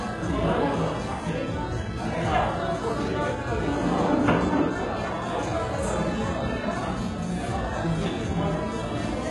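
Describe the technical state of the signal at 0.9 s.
At 0.9 s the sound carries damage that runs through the whole clip and is likely HE-AAC compression at a very low rate, consistent with around 12 kbps. The treble is not a true capture but a copy of lower bands shifted upward, so it sounds gritty and metallic, with harmonics that fail to line up above the crossover, and nothing remains above 11.5 kHz. A plain low-pass would leave the top dull; here it stays bright but artificial.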